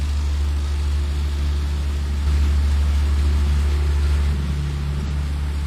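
A recording of sounds with two faults. From 2.27 to 4.33 s a doubled audio track appears: a full-band copy, about as loud as the original, trails it by roughly half a second. It is likely caused by a second, slower capture path or an edit leaving two copies out of step. Unlike an echo or reverb, it neither decays nor adds room colour, and it starts and stops abruptly. From 5.06 to 5.10 s, damaged data in a compressed stream causes a brief glitch as the decoder misreads frames and resynchronises.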